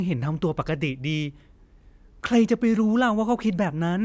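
No technical faults are audible.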